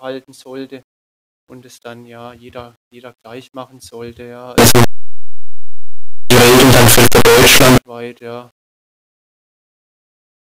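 A speech recording stored at 8 bits breaks into violent, harsh distortion from 4.58 s to 7.78 s, most likely because signed and unsigned samples were mixed up. Misreading the sign flips the top bit, so every zero crossing leaps across the whole range and soft moments blare as loudly as peaks. Ordinary clipping or 8-bit graininess leaves quiet passages quiet; here soft sounds come out as loud as strong ones.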